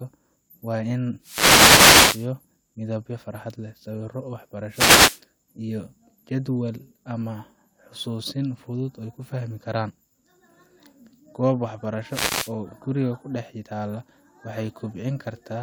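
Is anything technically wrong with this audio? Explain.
Yes. A wireless microphone noise hit occurs three times in this speech, at 1.20–2.31 s, 4.69–5.22 s and 12.08–12.53 s. The FM radio link fades as reflected signals cancel, so receiver noise surges up, heard as brief swishes of static over the speech.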